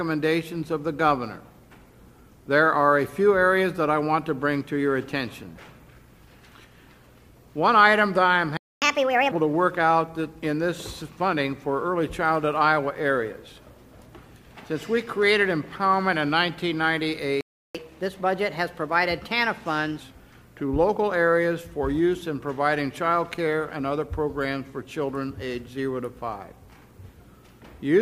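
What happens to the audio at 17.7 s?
At 17.41 s the sound cuts to silence for about 0.34 s, then resumes at 17.75 s. This playback stall is likely the player running out of buffered data, or its output thread being blocked, until it recovers.

From 17.75 s to 20.0 s the audio runs fast and sharp, at 1.15 times normal speed and roughly two semitones high. This catch-up at higher speed resamples the backlog left by the stall to recover the lost time.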